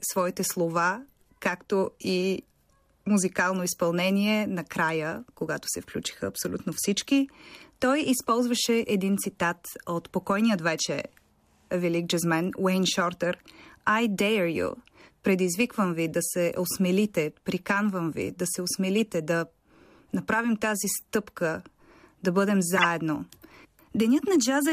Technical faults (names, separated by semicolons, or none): corrupt frame decoded